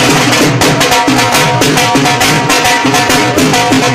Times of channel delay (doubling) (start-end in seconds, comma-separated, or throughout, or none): none